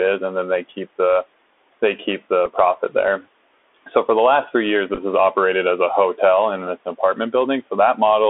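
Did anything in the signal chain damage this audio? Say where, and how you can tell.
Yes. The damage happens at the codec stage, across the whole clip. This is the Bluetooth CVSD headset codec. The speech sits in a narrow band of roughly 300 Hz to 3.5 kHz, with nothing above that, which fits a 64 kbps CVSD link. The codec sends one bit per sample, saying only up or down, with an adapting step. Fast, loud high-frequency energy outruns that step. So s sounds turn scratchy, and a granular hiss sits under the speech. The room noise sits about 25 dB below the speech.

The second fault is on the radio link between headset and phone. It is a Bluetooth headset packet repeated. From 2.46 to 2.51 s, between "they keep" and "profit there", about 7.5 ms of audio is lost. The decoder fills the gap by replaying the previous packet, leaving a short buzzy tick. From 4.95 to 4.99 s, after "the last three years" and before "is operated as a", about 18.8 ms is lost, scattered over 30 ms. 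The longest run is about 10 ms. Each repeat lands 3.75 ms after the last, so the runs give a brief buzz near 267 Hz.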